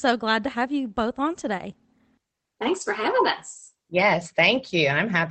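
Nothing here counts as a fault; the speech just has the mildly coded, narrowed sound of a call connection, with the top end tapering off around 8 kHz, which fits a voice codec like Opus doing its ordinary job.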